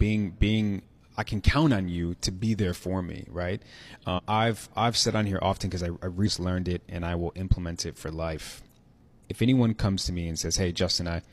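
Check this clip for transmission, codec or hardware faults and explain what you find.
There's one fault. At 4.14 to 4.20 s you get compressed frames skipped: a few whole frames never got decoded, so the speech jumps ahead around a fifth of a second, which fits four 46.4 ms frames.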